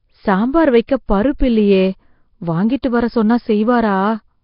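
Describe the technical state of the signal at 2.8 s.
Right around 2.82 s there's a short pre-echo: a smear of hiss lasting about 13 ms that arrives just ahead of a sharp onset in the speech. The codec spreads its quantisation noise across the whole transform block, so when a hard attack lands late in a block, noise sized for that loud moment spills into the quiet gap before it. You hear a brief hissy lead-in, and the attack itself comes across soft rather than crisp.

Underneath that, the whole clip carries heavy codec damage that sounds like Nellymoser compression, likely Flash's Nellymoser Asao at a low rate that fits something near 22 kbps. Nothing is left above 5.3 kHz, so the top end is dull, and the bands the coder starved are filled with noise. That gives the speech a rough, hissy halo and a murky, underwater smear.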